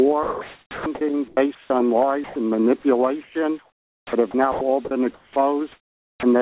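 From 0.23 to 1.7 s, the sound is chopped by the voice detector. The sender likely kept switching between sending and pausing. About 870 ms of real sound was swapped for comfort noise. Sound edges drop out.

From 2.24 to 2.36 s, comfort noise stands in place of the background. For 120 ms, the real background gives way to a flat, featureless hiss. It differs by about 5 dB from the background it replaces. That background was already about 32 dB under the loud parts. The sender had likely stopped sending audio during a quiet gap. The receiver then filled the gap with generated noise.

From 3.23 to 6.23 s, the chopping by the voice detector returns. It is longer this time. About 1.47 s in total is replaced by comfort noise. The choppy dropouts come back. Throughout the clip, the band stops at 4 kHz, which fits a narrowband call codec.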